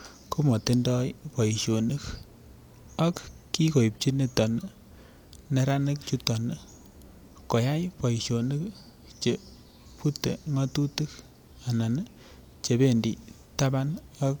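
No technical faults are audible anywhere in the speech recording.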